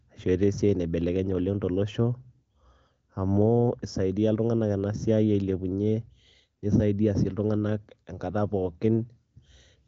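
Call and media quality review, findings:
No findings: the AMR wideband (HD Voice) path sounds as expected, with the audio band ending at about 7.3 kHz.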